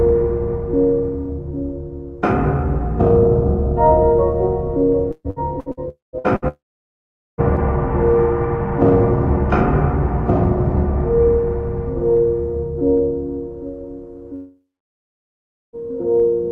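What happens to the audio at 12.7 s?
Nothing goes wrong at 12.7 s; the audio there is intact, carrying only the steady high-frequency limit near 12 kHz that the Opus call path keeps throughout.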